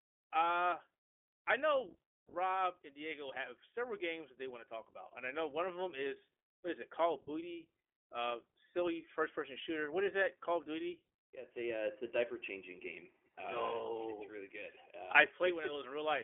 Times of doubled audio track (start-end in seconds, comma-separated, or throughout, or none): none